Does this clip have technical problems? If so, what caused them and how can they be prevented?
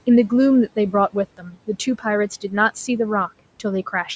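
Yes. Speech cut by the noise suppressor appears between 1.37 and 1.68 s. Within that stretch, roughly 150 ms of the speech is pulled down, by about 17 dB at its deepest, so parts of the sound come out swallowed and faint. The suppressor misjudged that low-level portion as background, and the quiet room noise sits about 22 dB under the speech. It applied the same gain reduction it uses on noise, clipping away real content. To prevent it, lower the suppressor's aggressiveness or raise the microphone level so quiet speech stays clearly above its noise threshold.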